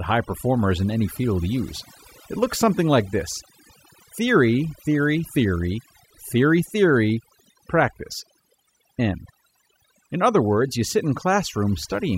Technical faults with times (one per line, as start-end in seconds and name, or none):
0.00-12.17 overdone noise removal